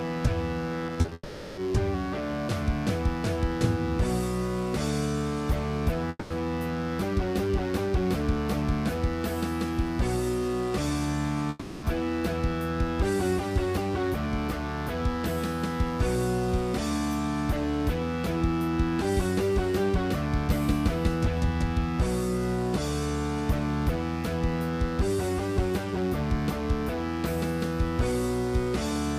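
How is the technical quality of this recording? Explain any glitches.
Not great: there's a constant buzz underneath, and the first dozen seconds have some choppy breakups and gaps.

The mains buzz runs the whole way through. It's a raspy 60 Hz buzz with harmonics climbing well up the spectrum, sitting only about 20 dB below the programme. That's the signature of switching spikes from a dimmer, rectifier or poor shielding leaking in twice every mains cycle.

From 0.87 to 1.12 s there's repeated packet loss, and it sounds robotic. A handful of short holes, the longest about 30 ms, get patched by stretching the previous sound. Roughly a third of that stretch is filler, so it turns choppy with bits missing.

The longer gaps come at 1.13–1.58 s, 6.09–6.31 s and 11.49–11.83 s. Each time the last sound smears on as a fading buzzy tail, sometimes dropping briefly to silence, then the audio picks up again with that chunk simply gone. 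That points to a long network dropout as the likely cause. The gaps last about 440 ms, 210 ms and 330 ms.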